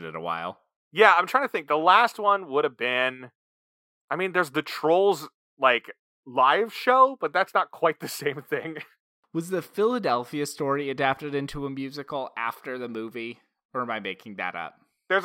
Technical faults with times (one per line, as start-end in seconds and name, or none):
none